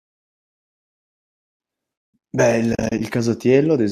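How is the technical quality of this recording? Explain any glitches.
One glitch stands out. Light low-delay coding texture runs through the speech, likely from AAC-ELD.

From 2.73 to 3.01 s there is AAC frame loss with muting. Several short frames drop out, about 130 ms in total across 280 ms, the longest gap about 40 ms. The decoder zeroes each lost frame. Overlapping windows fade the sound out and back in, leaving soft-edged holes.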